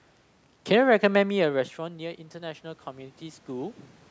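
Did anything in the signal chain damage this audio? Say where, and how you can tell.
Yes. Call processing: automatic gain rising from 1.13 s to 3.88 s. After the talker moves away around 1 s, the input drops about 16 dB, and the AGC slowly adds about 6 dB. The waveform envelope swells, and the spectrogram's noise floor brightens along with the voice.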